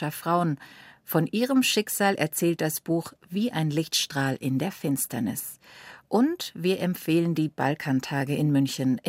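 No technical faults occur in this recording, so there is nothing to describe in time order.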